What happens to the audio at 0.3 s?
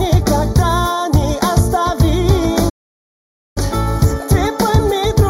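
At 0.3 s, as throughout, one channel lags the other by roughly 0.2 ms before the mono sum (channel delay, comb filtering), notching from around 3 kHz and sounding hollow.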